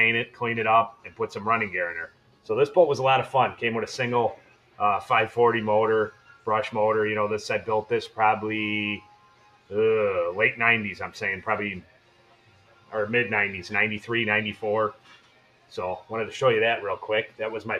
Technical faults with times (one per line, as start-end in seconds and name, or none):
0.00-17.80 noise suppressor applied to music or sounds
0.26-0.41 sound cut by the noise suppressor
0.92-1.20 sound cut by the noise suppressor
2.07-2.49 sound cut by the noise suppressor
4.36-4.80 sound cut by the noise suppressor
6.11-6.47 sound cut by the noise suppressor
9.00-9.71 sound cut by the noise suppressor
11.82-12.93 sound cut by the noise suppressor
14.93-15.73 sound cut by the noise suppressor